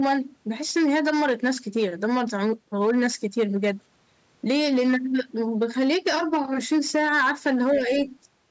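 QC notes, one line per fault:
Throughout, hard clipping: the speech is driven about 8 dB past the chain's limit, so roughly one sample in twenty is flattened, adding harsh fuzz to loud syllables.
7.75–7.92 s, speech suppressed in double talk: the voice dips by about 5 dB for some 150 ms, likely an echo canceller turning it down while the far side spoke.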